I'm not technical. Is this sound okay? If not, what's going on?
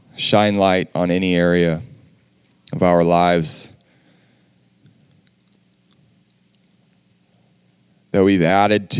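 Yes, nothing in this recording stood out as a problem when I listened to it.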